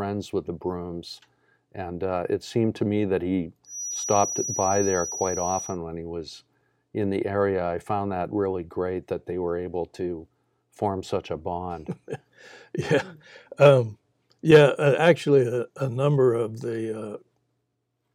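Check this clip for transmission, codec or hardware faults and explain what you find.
One fault appears, a feedback whistle. From 3.63 to 5.78 s, a loudspeaker-to-microphone loop likely sat at the edge of feedback, sustaining a thin, slightly wavering 5.8 kHz whistle somewhat below the speech.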